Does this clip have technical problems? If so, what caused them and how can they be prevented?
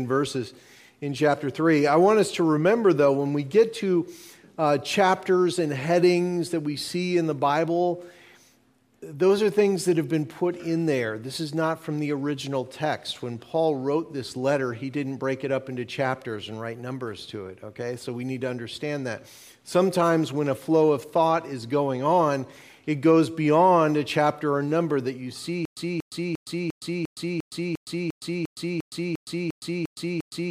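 Yes. From 25.65 s to the end, a stutter with silent gaps: a 235 ms burst repeats 14 times, each followed by about 115 ms of digital silence, a 350 ms cycle. The stream likely stalled and replayed its last fragment on each retry. Larger playback buffering and reliable delivery would prevent it.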